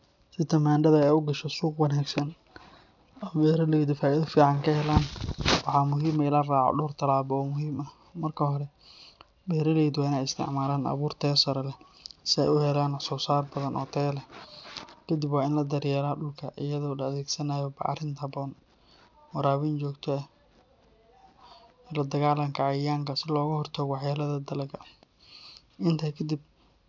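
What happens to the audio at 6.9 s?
Aliasing is present here, as it is for the whole clip. The sample rate appears to have been cut, fitting a drop to 12 kHz, with no anti-alias filter, so speech energy above 6 kHz folds back to false lower pitches, roughly 20 dB down, giving gritty, metallic sibilants.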